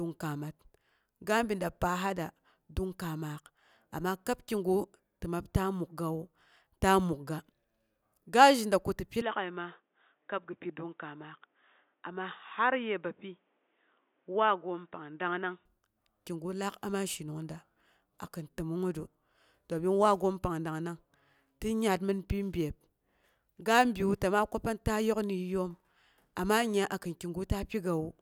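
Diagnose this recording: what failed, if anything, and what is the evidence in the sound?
From 9.21 s to 15.65 s the speech turns dull, with nothing above 3.8 kHz, drops about 5 dB and gains a faint new noise floor, with no gap at either switch. The likely cause is the input switched to a poorer device at the driver stage. The level and noise changes set it apart from a codec bandwidth cut.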